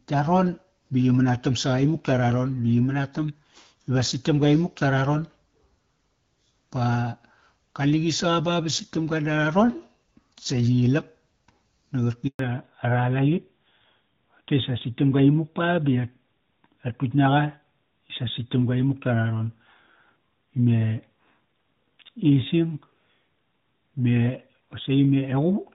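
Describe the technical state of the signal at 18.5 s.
At 18.5 s you're in the fallback to narrowband, which runs from 12.39 s to the end. The call has slipped from HD Voice down to an older narrowband codec, likely AMR-NB, so nothing above 4 kHz survives and the speech sounds duller and rougher than the wideband stretch before it.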